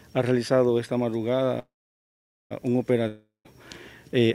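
At 1.59 s the audio stalls: the last sound buzzes briefly, fades to silence, then picks up at 2.53 s where it left off, a likely call audio freeze from delayed packets draining the jitter buffer. From 3.07 to 3.47 s there's a similar fading tail with a short silent stretch, but when the sound returns roughly 0.38 s is gone, likely a long network dropout.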